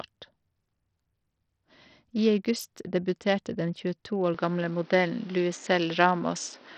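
From the start, the speech carries the sound of heavy Bluetooth SBC compression, likely from a low bit pool, and the damage fits a rate of about 64 kbps. With so few bits, the upper sub-bands are starved: the treble flickers in and out, and a gritty, coarse noise with aliasing rides on the sound. On a spectrogram, the top bands appear as blocky, patchy energy that comes and goes, with hard horizontal band edges where whole sub-bands drop to nothing.

At 4.34 s, the input switches to a poorer device, most likely another microphone or a headset's call profile, and stays there until the end. There is no gap at the change. The sound turns duller and boxier, because nothing above 7 kHz gets through, and the level shifts by around 5 dB. A new noise floor appears well beneath the speech, roughly 30 dB down. The spectrogram shows a flat ceiling at 7 kHz from 4.34 s onward, and the waveform shows a step in amplitude at the switch.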